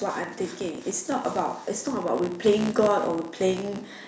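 A steady buzz at 62.5 Hz, tracking the level of the speech, runs through the whole clip. It is the filter restarted on every block, which fits 256-sample blocks, each starting from silence with a small tick. From 0.58 to 3.91 s, speech and background swell together by about 5 dB as automatic gain rises gradually on an input it judged too quiet. The call microphone processing is audible too, with nothing above 8 kHz.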